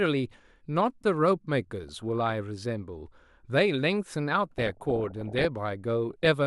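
Weak reception lets bit errors slip past DAB error correction into the MP2 data, so corrupted samples put short noise blips in single sub-bands and corrupted scale factors make sub-bands jump in level. This DAB burbling comes in as a few watery blips over the speech at 1.83 to 2.35 s, bubbles and squelches at 4.51 to 5.45 s (heaviest errors), and returns at 6.11 to 6.27 s.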